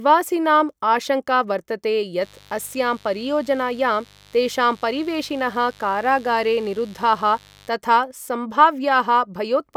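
From 2.22 s to 7.69 s a mains buzz sits under the speech, a steady raspy drone well below the voice. Switching spikes from unshielded wiring or a dimmer leak in twice in every 50 Hz mains cycle. A spectrogram shows evenly spaced horizontal harmonic lines climbing into the kilohertz range.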